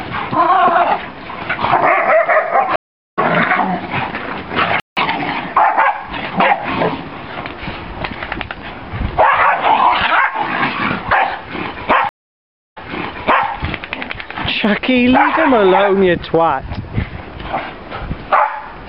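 At 2.76 s the audio drops into about 0.37 s of silence and comes back at 3.19 s having skipped ahead, roughly 0.4 s of material gone, with the first moments muted or fading in. This is a stream reconnect: the connection broke, the player waited, then restarted its decoder further along a live feed.

At 4.80 s the sound simply stops for 0.17 s and carries on at 4.97 s. That is a playback stall, most likely the player running short of data or its output thread being held up.

From 4.97 s to 6.65 s the audio runs hurried at 1.1 times normal speed yet keeps its pitch. This is time-compressed catch-up: the player trims its built-up backlog by cutting out small slices and cross-fading across the joins.

At 12.09 s a second stream reconnect brings 0.63 s of silence, then the audio resumes by 13.48 s about 0.76 s earlier than where it broke off, so a short stretch is heard twice, as the server resent a burst to the fresh decoder.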